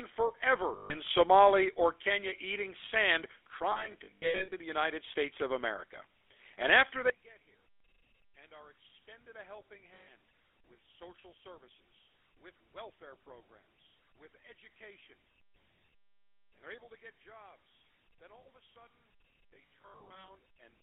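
A speech recording carried over the GSM full-rate codec, whose character fits the 13 kbit/s full-rate scheme, runs throughout. The codec rebuilds the voice from a vocal-tract model excited by sparse regular pulses, and the line band is squeezed to roughly 300 Hz to 3.5 kHz, so the speech sounds boxed-in, buzzy and gravelly, with the codec damage plainly audible. Lost GSM frames interrupt the decoding four times. The receiver fills each gap by repeating the last good frame's settings, giving a rough, metallic held ring instead of fresh speech. A solid 140 ms loss falls at 0.76 to 0.96 s and another at 9.94 to 10.12 s. Scattered losses totalling about 440 ms spread across 3.72 to 4.53 s, and about 400 ms across 19.50 to 20.29 s, with no single run much longer than about 70 ms, so those stretches stutter and ring in short bursts. From 7.10 s to the end, the level drops by about 25 dB, likely because one channel is inverted and the stereo pair has been folded to mono. 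The centred voice largely cancels against its reversed copy, leaving only a faint residue of the difference between the channels.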